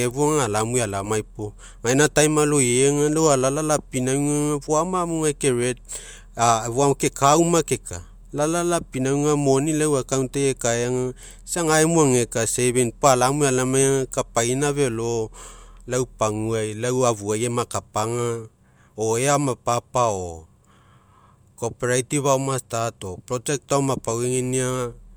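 Nothing in this speech recording stands out as a technical fault at any point.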